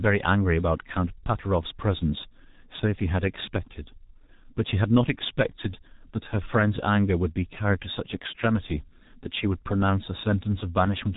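Throughout the speech, the signal has passed through the G.723.1 codec, an early internet-telephony coder that rebuilds speech from a coarse model refreshed only once every 30 ms frame. The heavy damage points to a very low bitrate of about 6 kbit/s. Nothing survives above 3.8 kHz, so the speech sounds muffled and boxed-in. The slow model updates leave a hoarse, rough texture, and consonants smear together instead of landing crisply.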